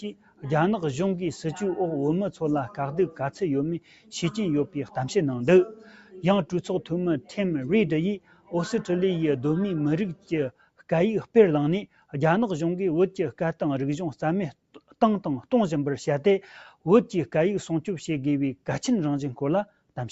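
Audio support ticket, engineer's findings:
Noise suppressor applied to music or sounds, whole clip. Speech-tuned suppressor left active. Steady tones, ambience and tails treated as noise and pulled down. Level pumps and thins, with a swing of around 5 dB. Attacks pass and sustained parts sag.

Sound cut by the noise suppressor at 0.08–0.44 s, 3.80–4.12 s, 4.67–4.96 s, 5.75–6.23 s, 8.19–8.53 s, 10.15–10.32 s, 10.52–10.82 s and 11.87–12.13 s. Sustained or decaying sound dips by about 11 to 12 dB for 0.15 to 0.5 s. The suppressor misclassified these passages as noise.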